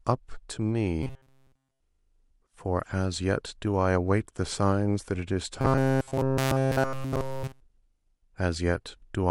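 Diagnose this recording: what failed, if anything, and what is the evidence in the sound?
Robotic sound from repeated short buffers at 1.03–1.80 s and 5.61–7.62 s: a rigid 133 Hz metallic buzz, likely a starved driver buffer looping roughly 7.5 ms segments.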